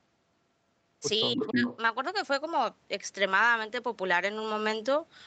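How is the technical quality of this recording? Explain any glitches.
The recording has two call glitches, both packed into a short stretch just after 1.3 seconds. The audio runs through an Opus call path with content reaching up to 8 kHz, so it has a slightly band-limited call sound.

From 1.35 to 1.66 s the speech dips hard, by roughly 15 dB at its deepest, for about a fifth of a second in total. That's speech suppressed in double talk, likely the echo canceller ducking everything while both ends overlapped.

Right on top of that, from 1.36 to 1.77 s, a copy of the voice comes back about 304 ms late, at roughly the same loudness as the speech itself. That's an echo leak, likely one side's loudspeaker sound slipping past its echo canceller into the microphone and being sent back.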